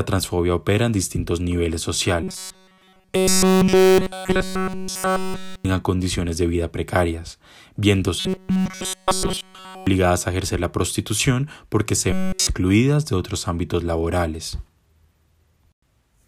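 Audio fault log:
2.23–5.65 s, 8.20–9.87 s, 12.13–12.47 s: robotic sound from repeated short buffers. The speech becomes a rigid metallic buzz at 188 Hz, likely from a roughly 5 ms chunk looping in place of almost all fresh audio.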